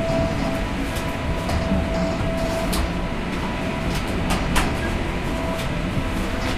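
No technical faults can be heard anywhere in this sound.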